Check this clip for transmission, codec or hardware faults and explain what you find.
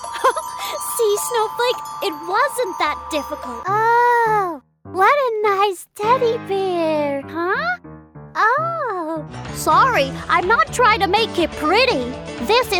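Nothing stood out on listening to this clip.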